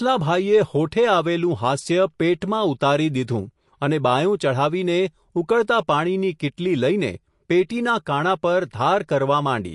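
Speech with MP3 compression damage throughout. Nothing remains above 11.3 kHz. The treble is cut at a fixed point. Weak frequency detail flickers on and off, giving a plainly audible watery, swirly texture. The cause is likely a low bitrate, around 48 kbps.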